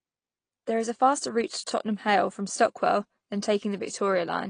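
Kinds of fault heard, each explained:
AAC compression: throughout, the speech sounds dull and smeared, with nothing above 9.6 kHz, likely from low-bitrate AAC coding discarding and coarsely quantising high frequencies.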